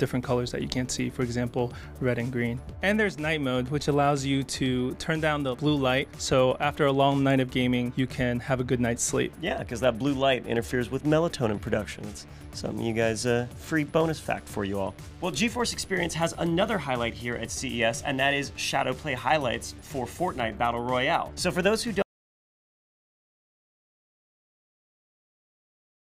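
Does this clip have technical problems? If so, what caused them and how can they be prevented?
Yes. At 22.02 s the sound cuts out abruptly, and the clip stays silent through to the end, with no room tone left. This is an audio dropout to silence. The likely cause is lost input, such as a disconnected device, a failed link or a stray mute, while recording continued writing silence. Securing connections and monitoring input levels during capture prevents this.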